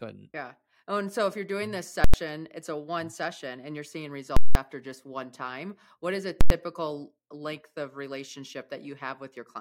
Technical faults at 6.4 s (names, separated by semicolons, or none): invalid numbers at full scale